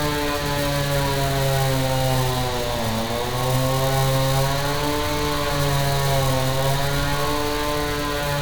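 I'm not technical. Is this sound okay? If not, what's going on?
Yes, nothing in this sound points to a technical fault, so there's nothing here to fix.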